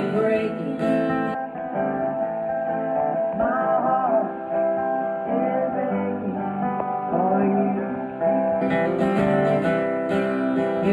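From start to finish, channel delay (comb filtering) colours the sound. One channel lags by a few samples, roughly a tenth of a millisecond, and summing to mono cancels around 5 kHz, leaving it dull and hollow. A spectrogram shows a steady dark notch band there.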